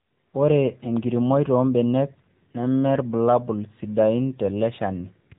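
Throughout, the speech carries AMR narrowband mobile codec damage. Nothing above 3.8 kHz survives, so it sounds thin and phone-like. The codec rebuilds the voice from a vocal tract model and a few pulses per frame. The buzzy, synthetic edge fits a low mode near 8 kbps.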